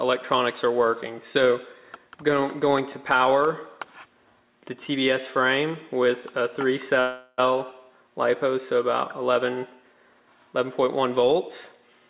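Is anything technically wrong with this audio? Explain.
Yes. From 7.0 to 7.40 s there is a call audio freeze. For about 0.38 s the last sound is held as a fading buzz, likely because packets stalled and the jitter buffer ran empty. The audio then resumes where it stopped, delayed but with nothing lost. A spectrogram shows a smeared, steadily dimming band, and the waveform shows a decaying repetitive stretch rather than a flat gap. Nothing in the clip rises above 4 kHz, which fits a narrowband G.711 mu-law call path.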